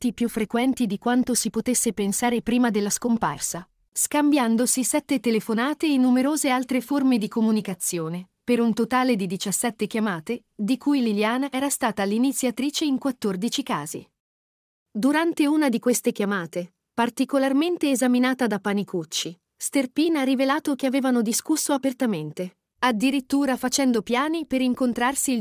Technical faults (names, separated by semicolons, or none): none